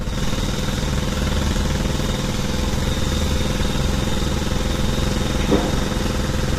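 Everyday sounds with plainly audible low-delay AAC compression throughout: a grainy texture with noise between tonal components, likely AAC-ELD near 32 kbps. Unlike band-limited codecs, content still reaches 21.8 kHz.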